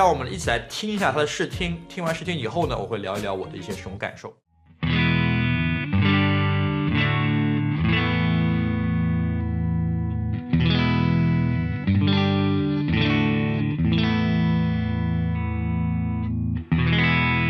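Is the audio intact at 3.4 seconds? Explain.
No. At 3.4 s, as throughout the clip, the sound is dull and carries a gurgling, granular distortion, likely from MP2 compression at a low bitrate, consistent with about 80 kbps. Too few bits forces upper sub-bands off and coarsely quantises the rest.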